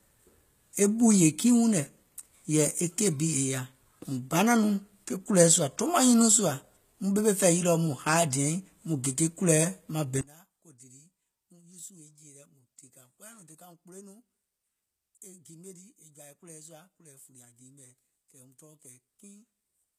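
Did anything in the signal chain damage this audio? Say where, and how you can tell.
Yes. The codec stage is the first problem. The treble is plainly damaged throughout, with nothing above 14.9 kHz, which fits HE-AAC compression at around 20 kbps. The upper band is likely rebuilt by spectral band replication, so its harmonics don't line up with the real lower spectrum.

The second problem is at the analogue wiring or mixdown stage. From 10.21 s to the end, the whole signal drops by about 26 dB, leaving only a residue. That is likely one channel inverted: reversed polarity makes the content shared by both channels cancel when they are summed to mono.

The third problem is codec pre-echo at 18.58 s. A 10 ms smear of hiss runs ahead of an attack. The transform spreads quantisation noise across its whole block, so the noise sized for the loud onset also fills the quiet moment before it.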